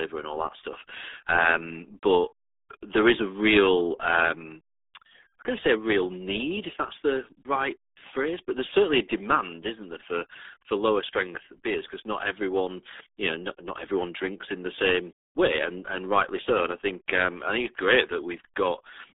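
RealAudio 14.4 codec artefacts run through the whole clip. The speech has been squeezed through a very low-rate modem-era coder, consistent with about 8 kbit/s. It is confined to roughly 300 Hz to 3.6 kHz, with nothing above 3.8 kHz, leaving it heavily muffled and gargly.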